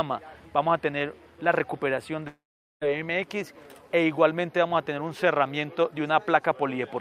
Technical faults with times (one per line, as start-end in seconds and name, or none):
2.27-2.83 long network dropout